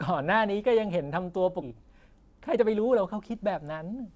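Around 1.62 to 1.64 s there's a skip ahead. Roughly 0.7 s of speech just never plays, and nothing fills the hole. The audio on either side gets butted together, so the talker seems to leap forward mid-flow. That's what you get when a chunk is lost in transit or thrown out by an overflowing jitter buffer while later audio is already queued, and the delay drops by about the same amount.

Right after, from 1.74 to 2.86 s, comes a jitter buffer speed-up at 106%. The buffer is still holding more than it wants, so it trims tiny pitch-period slices over and over, something like 70 ms in total. The pitch stays put but the delivery sounds a touch rushed. It happens again from 3.63 to 4.11 s at 108%, shaving maybe 40 ms, and that pass is a bit more noticeably hurried. All of this rides on a call path whose band stops at 8 kHz, which points to G.722 at 64 kbps.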